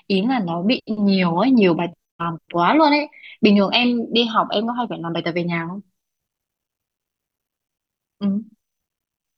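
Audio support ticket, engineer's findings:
No faults found on listening to the speech clip. Nothing audible points to any component or mechanism in the chain.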